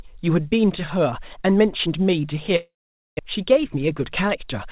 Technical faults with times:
2.56-3.21 long network dropout

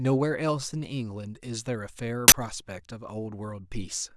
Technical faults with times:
2.28-2.32 uninitialised buffer

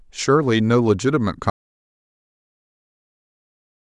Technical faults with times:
1.50-3.90 audio dropout to silence

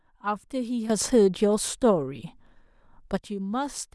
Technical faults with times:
0.90-3.17 sudden gain jump

